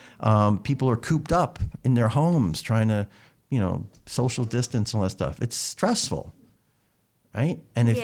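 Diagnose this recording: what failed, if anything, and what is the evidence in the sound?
Call bitrate drop at the codec, 3.57–7.52 s: 32 falling to 17 kbps dulls and coarsens the speech continuously, with no packet-loss gaps.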